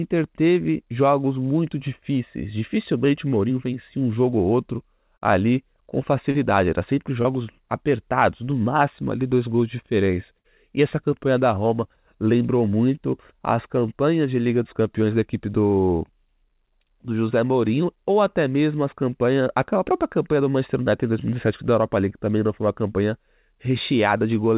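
Brief smears in the speech at 4.30 to 4.33 s, between "vencia um" and "ou outro", then at 5.17 to 5.23 s just after "ou outro", at 6.31 to 6.36 s and at 7.22 to 7.26 s are short concealed packet loss. In each case, 20 to 40 ms of audio never arrived in time. The receiver covered the hole for 13 to 37 ms by extending the preceding sound and then blended back into the real signal. This leaves a wobble, and a short sound can drop out.

At 10.38 to 10.46 s, right after "dois gols de diferença", there is a longer stall that is a burst of packet loss. For 59 ms the receiver continued the last sound while fading it down, which gives a held buzz if the sound was voiced or a dying hiss if it was not. Speech then picks up 60 ms further on, so that stretch is gone. Throughout, the call path passes nothing above 4 kHz, which points to a narrowband codec such as G.711.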